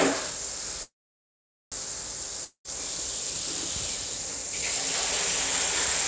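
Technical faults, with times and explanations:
0.83–1.75 s, call audio freeze: the last sound carries on as a fading buzz and then about 0.8 s of silence before the sound resumes exactly where it stopped. Nothing is lost, but about 0.89 s of delay is added, likely because delayed packets emptied the jitter buffer.
2.44–2.75 s, long network dropout: the sound trails off into a brief fading buzz and about 0.09 s of silence. It then returns further on, with about 0.21 s skipped. The likely cause is packets that never arrived and were never played.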